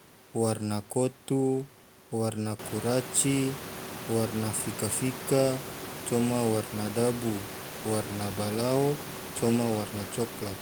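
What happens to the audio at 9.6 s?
At 9.6 s the audio is intact, with only the room's background noise sitting about 14 dB below the speech, as it belongs to the recording.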